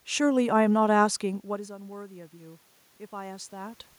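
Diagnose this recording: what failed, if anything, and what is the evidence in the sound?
Automatic gain rising in the call processing stage: from 1.22 s to 3.84 s the level climbs by about 5 dB after the input fell by about 19 dB when the talker moved back at around 1.5 s. Unlike the movement itself, the room noise swells along with the voice, so the gain control is lifting everything.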